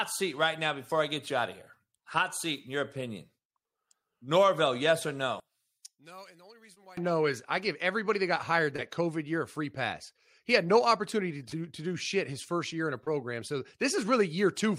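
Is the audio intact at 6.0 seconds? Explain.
No. At 6.0 seconds the speech falls inside a stretch from 5.4 to 6.97 s, just after "yes or" and ending before "no is I give", where one channel inverted is the likely cause. With one side's polarity flipped, the content shared by both channels cancels when they are summed to mono, so the centred speech drops by about 26 dB, leaving only a faint residue of the channel difference until normal polarity returns.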